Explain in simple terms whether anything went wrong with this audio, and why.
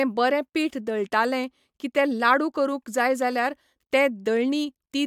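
Nothing went wrong here: the speech comes across steady and unbroken, with no glitches, dropouts or odd noises to point to at any moment.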